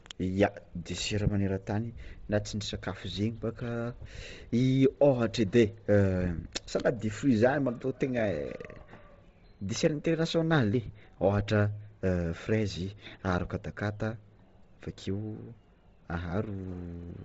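Throughout, speech stops at 7.7 kHz, upper band grainy and breathy, noise-filled rather than plainly low-passed: likely Bluetooth LC3 compression, fitting roughly 24 kbps.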